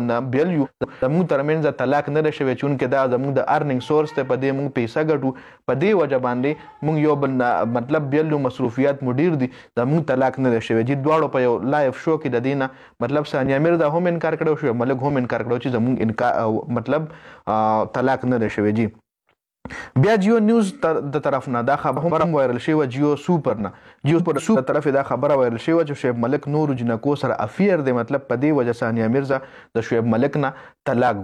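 Frames out of order at 0.65 to 1.03 s, 21.97 to 22.26 s and 24.18 to 24.57 s: in each stretch two adjacent runs of frames were decoded swapped, so the later chunk plays before the earlier one. The halves last about 0.19 s, 0.14 s and 0.19 s, which fits runs of four, three and four frames. Each stretch comes out as a garbled flutter, and no time is lost.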